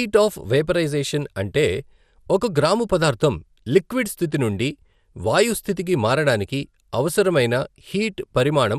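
Throughout the speech the sound is dull, with a gurgling, granular roughness as upper frequencies flicker in and out. The cause is likely MP2 compression at a rate that fits about 80 kbps, too few bits to keep upper sub-bands on or finely quantised.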